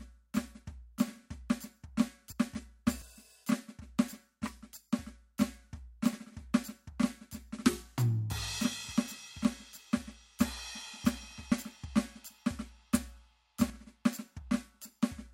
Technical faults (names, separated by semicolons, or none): dropped buffer (overrun)